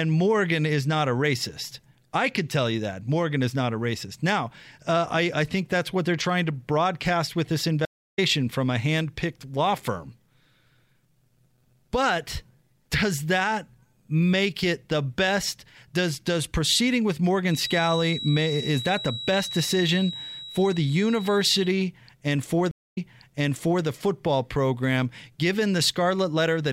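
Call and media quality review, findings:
Stream reconnect, 7.85–8.19 s: connection drop, 284 ms silence, player reconnects with fresh decoder mid-stream. Speech resumes roughly 0.3 s further on, content skipped as in live playback; opening frame muted or fading in.

Stream reconnect, 22.71–23.84 s: 213 ms silence, then playback restarts 914 ms earlier. Server resent buffered burst, so speech repeats; new decoder start audible at resumption.

Feedback whistle, 17.44–21.78 s: thin steady 3.9 kHz tone about 10 dB under speech, level swelling and fading slowly. Likely loudspeaker-to-microphone loop held just at feedback threshold, one frequency sustaining without runaway.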